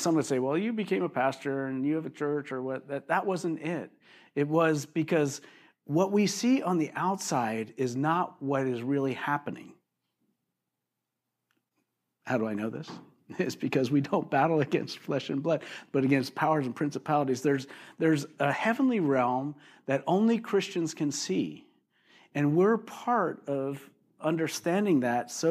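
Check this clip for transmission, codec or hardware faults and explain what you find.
Careful listening turns up no faults anywhere in the recording. No moment in the speech calls for an explanation.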